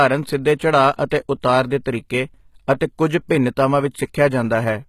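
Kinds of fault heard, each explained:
HE-AAC compression: The speech has likely gone through an HE-AAC encoder at a very low rate, with damage that fits a bitrate around 20 kbps. Only the lower spectrum is properly coded. The treble is rebuilt by copying lower bands upward and shaping them with a coarse envelope, so its harmonics no longer line up with the real ones. The damage is plainly audible: s sounds turn gritty and metallic, and nothing is present above 14.9 kHz.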